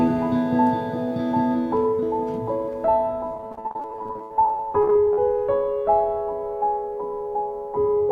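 From 3.34 to 5.22 s the music suffers repeated packet loss, producing a robotic sound: dozens of short dropouts, up to 73 ms, patched by extending prior audio, leaving it choppy.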